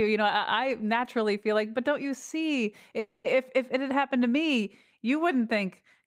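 Packets were likely held up in transit, draining the jitter buffer and causing a call audio freeze from 2.99 to 3.26 s. The receiver stretches the last sound into a fading buzz for about 250 ms, then the speech resumes where it stopped, nothing lost but now running later.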